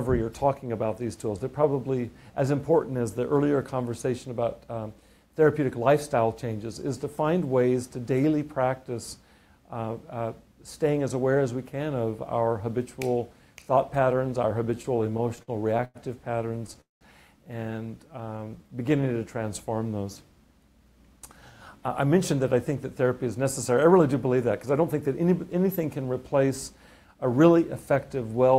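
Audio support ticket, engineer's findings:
Repeated stalls (stutter), 14.75–15.97 s: 12 short holds, longest 104 ms, about a fifth of the span concealed; again 16.53–16.77 s, four holds of at most 10 ms. Jitter buffer repeatedly underrunning, last sound extended each time. Many brief catches, not one gap, unlike a freeze.

Call audio freeze, 16.81–17.03 s: single hold of about 0.2 s, last sound fading into 160 ms of silence, then resumes where it stopped. Nothing lost; latency up about 0.2 s. Likely packets held in transit, buffer emptied. One clean gap, no stutter pattern.

Jitter buffer slow-down, 18.07–19.39 s: audio dragged to 87% speed, 181 ms inserted, pitch unchanged, sounds drawn out. Receiver repeating pitch periods to rebuild a low buffer. Continuous stretching with no gap or fade, which separates it from a freeze or stall.

Jitter buffer speed-up, 21.81–26.51 s at 106%, roughly 0.3 s cut; 27.07–27.40 s at 112%, roughly 50 ms cut. 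Buffer over target, receiver dropping pitch periods to shed delay. Hurried at the same pitch: the reverse of the slow-down, and no pitch rise as plain resampling would give.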